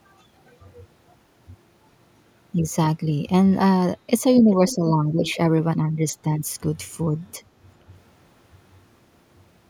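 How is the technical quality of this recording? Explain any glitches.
Two short glitches stand out, both an echo leak. From 4.51 to 4.76 s, and again from 5.25 to 5.35 s, a faint delayed copy of the speech trails behind it, lagging by about 0.39 s and sitting around 20 dB below the direct sound. It sounds like a ghost repeating fragments. The likely cause is a far-end echo canceller missing part of its loudspeaker pickup. On a spectrogram, weak duplicated harmonic patterns appear shifted right by that lag.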